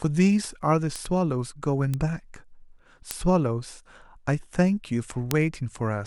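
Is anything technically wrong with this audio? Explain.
Yes, bit error spikes at 0.96, 1.94, 3.11 and 5.31 s. A flipped bit in one or two samples makes the value jump by a power of two and return, reaching about −10 dBFS for the first two and about −4 dBFS for the last two. Each is a single sharp, full-band tick that has nothing to do with the speech, unlike edit clicks, which fall at waveform discontinuities.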